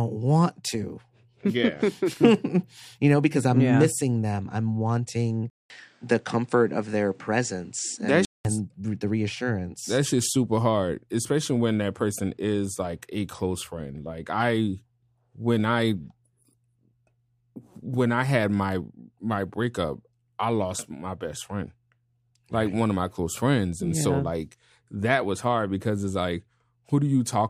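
At 5.5 s, right after "missing them I'm wanting", the speech goes quiet for 200 ms, then returns duller, with nothing above 9.8 kHz and a faint new background noise well beneath it. Loudness stays about the same. It clears again at 8.45 s, just before "the reassurance". The likely cause is an input switched to a poorer device. The gap at the switch and the different noise floor set it apart from a plain filter or codec bandwidth drop.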